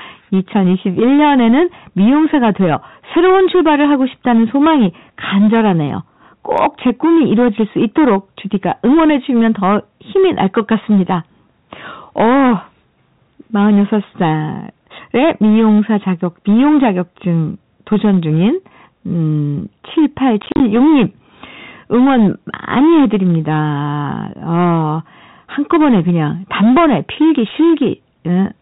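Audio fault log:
throughout: hard clipping. The speech is pushed about 8 dB past what the chain can pass, so roughly a tenth of the samples have their peaks sheared flat. Those flat tops add harmonics far above the voice, giving a harsh fuzz on every loud syllable rather than an occasional crackle. Unlike codec distortion or a soft limiter, the grit rises and falls with level.
20.42–20.6 s: packet loss filled with silence. About 90 ms of sound drops out, scattered across a 180 ms stretch, and the longest single hole is 40 ms. The gaps are multiples of a short unit, which fits 10 ms packets, and each is silence with abrupt edges. That hard-edged, silent chopping separates it from concealment, which would smear or repeat sound, and from a fade or a level dip.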